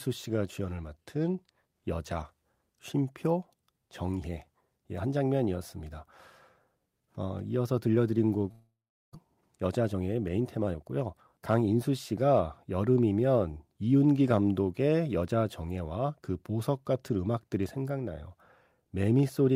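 Speech, with two network-related faults close together. From 8.51 to 9.17 s the sound breaks off: the last sound is carried on as a buzzy tail that fades out, followed by about 0.39 s of silence, and speech resumes with roughly 0.4 s of material missing. This is likely a long network dropout, where no packets reached the receiver, so it filled the gap with concealment and then jumped ahead once data returned. From 9.58 to 10.84 s there is a jitter buffer speed-up: delivery resumed with the buffer holding around a fifth of a second more audio than its target, and the receiver trimmed it back by cutting many short pitch-period pieces in succession. The speech runs at about 116% speed with unchanged pitch and sounds noticeably hurried across that stretch.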